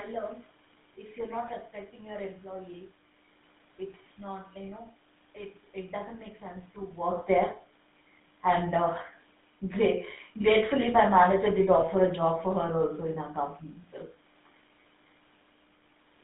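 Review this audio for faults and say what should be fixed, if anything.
GSM full-rate codec damage runs through the whole clip. The decoder drives a vocal-tract model with a sparse pulse excitation, so the speech sounds buzzy and gravelly. The band sits between 150 Hz and 3.6 kHz. This fits a 13 kbps GSM full-rate path. Switching to a wideband codec such as AMR-WB would prevent it.

GSM bit errors strike from 11.77 to 11.85 s, between "my manager did" and "a job for". Flipped bits corrupt the filter, pitch and gain values. The decoder then squawks and gargles briefly. This points to about four damaged frames at roughly 2% bit errors. A stronger radio link or better channel error protection would prevent it.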